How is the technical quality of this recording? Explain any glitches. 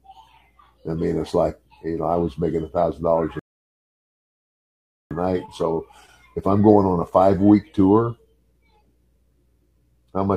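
The recording has one glitch. At 3.39 s the sound drops into silence and picks up again at 5.11 s exactly where it stopped, with nothing missing. This is a rebuffering stall: the player exhausted its downloaded audio and paused until more arrived, adding about 1.7 s.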